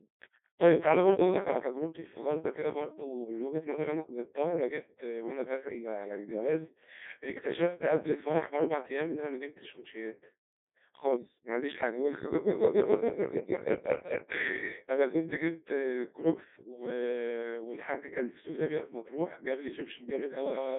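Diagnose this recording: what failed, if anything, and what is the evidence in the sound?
The codec stage is the culprit: this is the Codec 2 vocoder, heavily damaging the speech the whole way through. It sounds robotic and buzzy, squeezed into roughly 200 Hz to 3.5 kHz with nothing above 3.6 kHz. The decoder rebuilds speech from pitch and envelope using sine waves, which fits a very low rate near 1.2 kbit/s.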